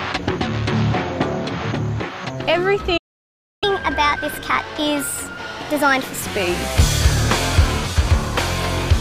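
At 2.97 s the sound cuts out mid-flow and stays silent until 3.64 s, a gap of about 0.65 s, before carrying on from where it stopped. This is a playback stall: the player most likely ran short of data or had its output thread held up, so nothing reached the output until it recovered and picked up its queued audio again.

From 3.64 s to 6.22 s the audio runs noticeably fast and sits higher in pitch, roughly four semitones up, then settles back to normal at 6.22 s. This is catch-up at higher speed. Having fallen behind during the stall, the player resamples its backlog to play it at 1.25 times normal speed. Because speed and pitch are tied together in that approach, everything rises until the lost time is recovered.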